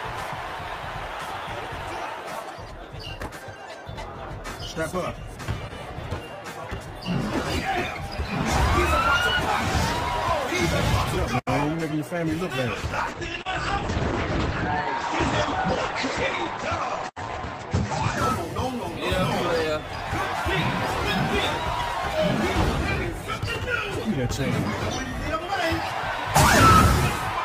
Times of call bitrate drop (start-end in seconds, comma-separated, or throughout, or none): 12.74-18.73